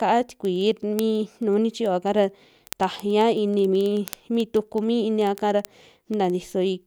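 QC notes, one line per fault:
0.13 to 6.84 s, word clock ticks: a steady train of sharp, uneven clicks, about twenty per second, runs under the speech. The receiver is on its own clock, drifting a few hundred ppm from the sender, so roughly every 50 ms a single sample slips, around 150 times.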